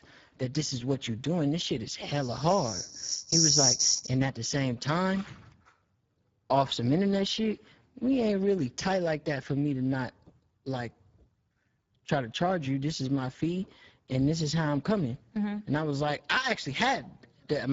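Throughout the speech, Speex codec damage is plainly audible: with too few bits for the excitation, voices turn hoarse and noisy, which fits a rate near 10 kbps. Nothing sounds above 7.7 kHz. That hoarse, noisy quality, rather than a clean dull roll-off, separates it from simple band-limiting.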